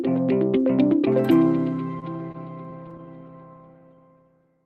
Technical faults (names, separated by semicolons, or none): repeated stalls (stutter)